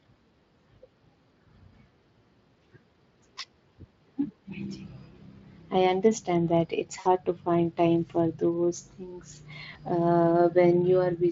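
At 6.99 to 7.07 s and again at 9.73 to 9.80 s, VoIP packet loss concealed by the speech codec: the decoder lost packets and extrapolated from its last pitch and filter. The first gap fits about three 20 ms frames and the second a single frame. Instead of a silent dropout or click, the gap fills with a stretched, buzzy tone or coloured noise that fades, and the speech stays weak for a moment afterward. The Speex coding around it, which fits roughly 24 kbps, adds light codec damage.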